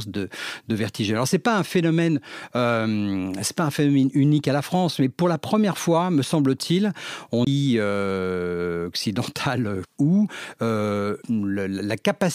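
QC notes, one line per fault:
7.45–7.47 s, CD skip: the speech cuts out for about 20 ms, then resumes from a different point in the recording, as if the laser had been knocked onto another turn of the disc spiral and the player muted briefly before reading on. On the waveform this is a short flat gap bounded by abrupt edges. On a spectrogram it shows as a thin blank column, and the speech patterns on either side do not join.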